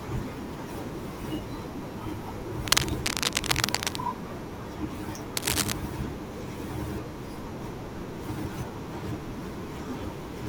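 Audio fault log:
2.67–3.96 s and 5.37–5.72 s: cable scratch noise. Ragged bursts of scratchy rustle sit a bit louder than the speech, likely a worn cable or connector being jostled.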